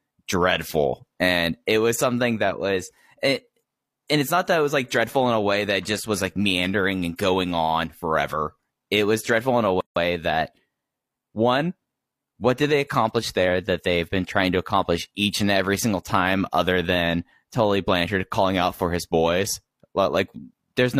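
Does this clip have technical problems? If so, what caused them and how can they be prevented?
Yes. Right after "was dreadful in a", the speech drops into a gap at a join of encoded pieces from 9.81 to 9.96 s, lasting 157 ms, then resumes where it stopped. The clip was probably encoded in separate pieces and joined untrimmed, so each encoder's leading delay and last-frame padding stayed in. A waveform shows a flat silent stretch with smeared edges; a spectrogram shows a blank vertical band, its borders smeared. Encoding the whole recording in one pass, or trimming delay and padding before joining, prevents this.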